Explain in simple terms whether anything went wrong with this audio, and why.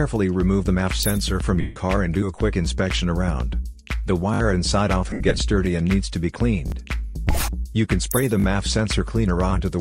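Two kinds of glitch can be heard. From 1.61 to 1.76 s, and again in broken patches between 5.10 and 5.39 s, the sound turns into a brief noisy smear. These are lost LE Audio frames: wireless audio packets went missing, and the decoder filled the gaps by re-using the last good sound with its detail scrambled.

At 4.34 s, 6.68 s and 8.40 s there is a quick stutter, like a tiny skip. This is a repeated buffer: fresh audio arrived late, so the device replayed the same 20 ms snippet three times at 4.34 s and twice at the others.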